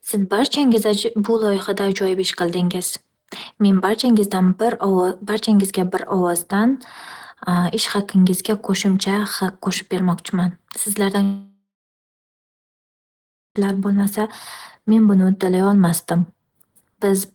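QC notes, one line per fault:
11.23–13.61 s long network dropout: speech smears into a fading buzz, then 1.9 s of silence, likely because 2.3 s of audio never arrived.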